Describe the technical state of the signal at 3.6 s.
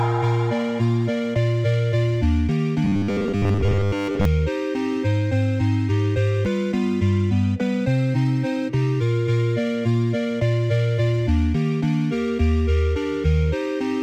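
At 3.6 s the signal is in the middle of robotic sound from repeated short buffers, running from 2.84 to 4.25 s. New audio arrives too seldom, so the likely cause is playback filling the gaps by looping a 10 ms slice, with most of the material replayed and real audio skipped. The result is a rigid, metallic 100 Hz buzz. A waveform shows identical 10 ms cycles, and a spectrogram shows harmonics stacked at exact 100 Hz steps.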